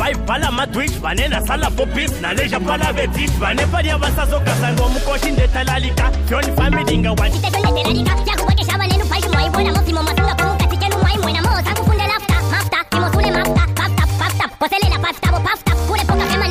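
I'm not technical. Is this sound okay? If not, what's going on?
No. There is a section at the wrong speed from 7.32 s to the end. From that moment the sound plays about 1.42 times faster than normal, so it rushes along and jumps noticeably higher in pitch, by roughly seven semitones. Speed and pitch change together because they both come from the playback rate. The likely cause is that this stretch was fed through an editor or player set to the wrong clock rate.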